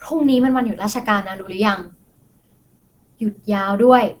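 Speech with plainly audible Opus compression throughout, likely from a low-bitrate hybrid-mode encode near 16 kbps, sounding hoarse and grainy. On a spectrogram, noise-filled upper bands still extend to about 20 kHz.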